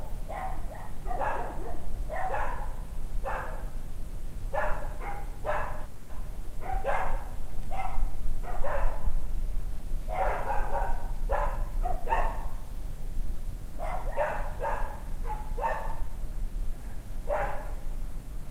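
A recording of everyday sounds with two timing faults. From 5.85 s to 6.11 s there is a call audio freeze: the last sound is stretched into a fading buzz or hiss lasting about 240 ms instead of moving on. This is likely because packets stalled and the jitter buffer ran dry. No silence occurs, and the sound resumes where it stopped, so nothing is lost but everything after it is pushed about 240 ms later. From 11.3 s to 16.6 s a jitter buffer speed-up follows. The receiver trims short pitch-period-sized pieces again and again to shed excess buffered delay, making the sound run at 104% speed without a pitch change. About a fifth of a second is removed over that stretch, roughly recovering the earlier added delay.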